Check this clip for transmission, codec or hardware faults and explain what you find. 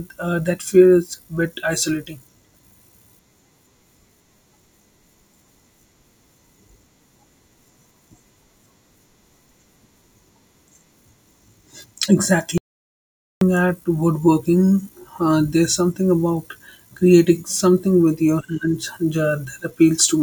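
There is one fault, an audio dropout to silence from 12.58 s to 13.41 s. The speech stops abruptly mid-flow and the following 0.84 s is dead silence, with no room tone or background underneath, before the speech cuts back in just as suddenly. Whatever was spoken in that stretch is simply missing. The input signal was likely lost for that moment, through a disconnected device, a failed link or a brief mute, while the recorder kept writing silence.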